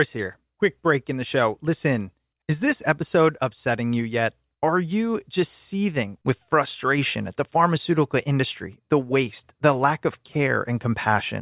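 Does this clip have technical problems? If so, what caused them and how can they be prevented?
No, the speech signal carries no technical faults, so there is nothing to diagnose or prevent.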